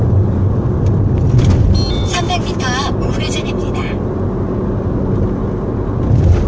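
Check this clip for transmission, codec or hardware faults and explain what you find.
No faults turn up in this clip.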